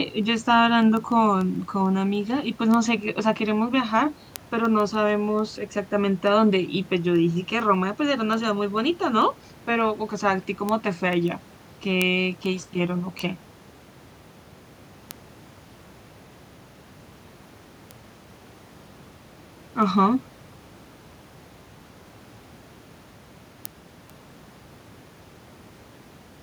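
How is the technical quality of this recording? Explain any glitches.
The speech recording has one persistent glitch: word clock ticks from about 0.23 s to 26.31 s. Roughly every 0.15 s, an unlocked receiver, mismatched by around 150 ppm, drops or repeats a sample. The result is a metronomic ticking, unlike random clicks.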